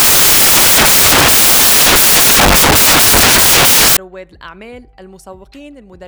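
From 0 to 3.97 s, the audio is replaced by broadband noise. This is samples built from the wrong bytes. The reader joined each sample's bytes incorrectly, through a byte offset, swapped order or wrong alignment. The fast-changing low bits then dominate every value.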